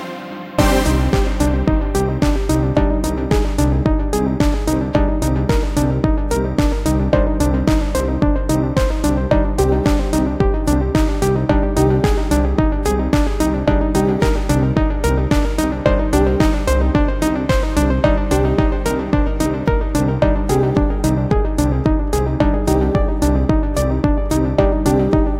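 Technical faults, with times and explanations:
No technical faults are heard in this audio.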